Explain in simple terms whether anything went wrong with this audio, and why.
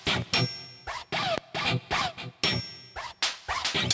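Aliasing runs through the whole clip. The sound was converted to a lower sample rate, likely 16 kHz from 44.1 kHz, without first removing content above 8 kHz. That content folded back as false, unrelated tones, so bright sounds come across gritty and metallic throughout.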